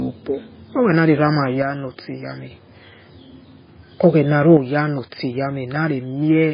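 Speech with heavy codec damage throughout: nothing above 5 kHz, plus the watery, swirling texture of weak spectral detail switching on and off between frames. This is likely MP3 compression, and the damage points to a very low bitrate, around 16 kbps. The level drops abruptly by about 6 dB from 1.62 to 2.51 s, and again from 4.57 s to the end. Each drop is a clean step with no change in tone, the pattern a mono sum gives when one channel drops out, which is the likely cause.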